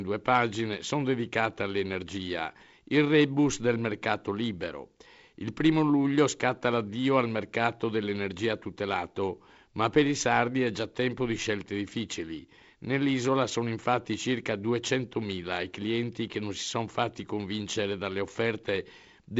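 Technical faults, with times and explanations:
The speech comes through a wideband telephone path whose sound fits G.722 coding at 48 kbit/s, with content extending up to 7.7 kHz and nothing above, carrying only the light upper-band hiss and slightly grainier lower band that this coding mode leaves.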